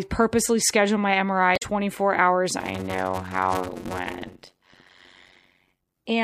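A speech recording with two distinct faults. From 1.53 to 1.63 s there is damaged data in a compressed stream: corrupted bytes make the decoder misread frames and lose sync, giving a brief glitch as it searches for the next frame header. From 2.58 to 5.99 s a block size mismatch (padded) sets in. Each written block is zero-filled to a longer read size, producing a 91.9 Hz buzz at the block rate and slowing the speech to 0.533 times normal speed at roughly unchanged pitch. This fits 256-sample blocks being read as 480-sample blocks.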